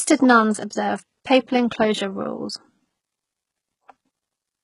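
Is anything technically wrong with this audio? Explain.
Yes. HE-AAC compression runs throughout the speech, likely at a very low bitrate around 12 kbps. Only the lower spectrum is truly coded; the treble up to about 11.1 kHz is rebuilt from copied lower bands, so s sounds come out heavily gritty, metallic and lispy, with nothing above that cutoff.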